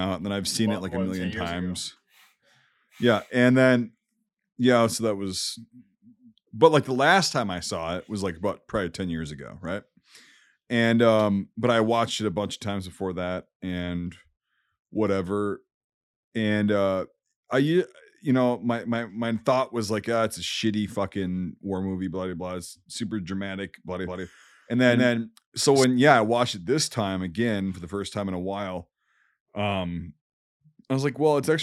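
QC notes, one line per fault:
24.04–25.84 s doubled audio track: speech echoes about 200 ms behind at near-equal level, starting and stopping abruptly; likely a second copy mixed in out of step.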